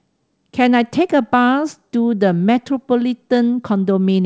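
No technical faults can be heard in the speech, which shows the expected band limit of a wideband call path, with nothing above 8 kHz, consistent with G.722 coding.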